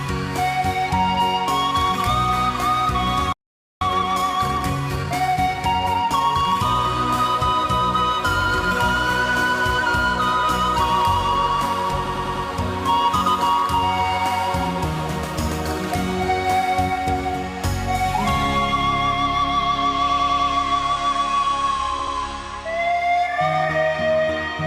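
At 3.33 s the player likely ran out of data or had its thread blocked, a playback stall that cuts the sound to silence for about 0.48 s, until 3.81 s. From 3.81 to 6.81 s the player works off its backlog by time-compressed catch-up, trimming and cross-fading small pieces so the audio runs 1.15 times fast at normal pitch. Later, a block of compressed data is delivered more than once, producing repeated frames. A 100 ms piece plays four extra times from 12.05 to 12.45 s and again from 20.09 to 20.49 s, each stutter adding 0.4 s. An 80 ms piece plays twice more from 21.99 to 22.15 s, adding 0.16 s.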